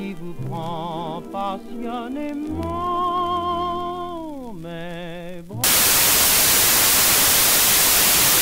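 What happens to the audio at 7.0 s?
At 7.0 s the audio is in a stretch of samples built from the wrong bytes, running from 5.64 s to the end. Because the reader joins each sample's bytes wrongly, fast-changing low bits become large values, producing loud broadband noise rather than the waveform-shaped distortion of clipping.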